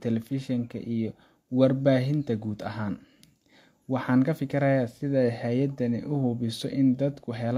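Just speech here, and there's nothing technically amiss to flag anywhere in it, so there's really nothing to pick apart.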